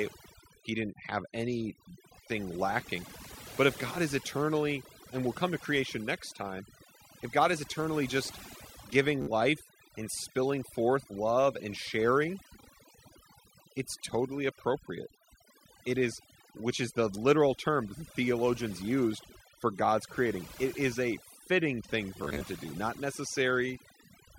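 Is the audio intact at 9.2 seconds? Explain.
No. From 9.22 to 9.29 s the speech breaks into a brief buzzing, machine-gun stutter, then picks up slightly further along. This is Bluetooth stutter: packets arrived late or not at all, so the receiver kept replaying its last short slice. The gap fits about four lost frames, roughly 56 ms.

Underneath, a steady low tone sits about 30 dB below the speech. This is mains hum at 50 Hz, where a ground loop or nearby transformer has leaked the power-line frequency and a few low harmonics into the signal.

The background drops and breaks up into twinkling specks. This is overdone noise removal: the reduction was set too strongly, so frequency bands close to the estimated noise were pulled far down, taking quieter parts of the speech with them.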